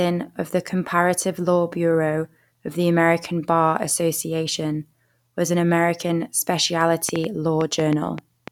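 From 7.09 s to 8.49 s, near the end of this speech clip, a train of clicks sits over the audio. About seven sharp pulses arrive at roughly five per second, unevenly spaced. Each has much the same shape. They peak around 15 dB above the speech, so they stand out clearly as ticking or popping, including in the gaps. The likely cause is interference from nearby equipment or a faulty connection or power supply injecting repeated pulses.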